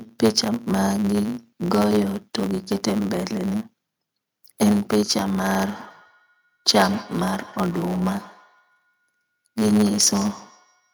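From the start of the recording to the end, a block size mismatch (truncated) is at work: one stage hands over blocks longer than the next stage takes in, and the tail of every block is dropped. Those regular cuts put a buzz at 109 Hz over the speech, and because part of each block never arrives, the talking runs 1.09 times fast while the pitch stays close to natural.

From 5.4 s to 10.93 s, feedback echo between two devices joins in. A second device in the same room replays what the first microphone sent, and that microphone hears it again. Each echo canceller only removes its own device's output, so the loop survives. Every syllable comes back roughly every 150 ms, peaking about 21 dB below the speech, each return thinner and more ringing than the last.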